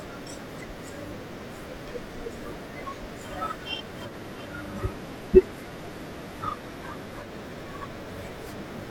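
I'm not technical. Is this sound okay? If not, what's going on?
No. Between 4.03 and 7.31 seconds, the radio lost its digital signal and switched over to the station's ordinary FM broadcast. That's digital radio blending to analogue. The speech picks up a faint background hiss, then quickly switches back.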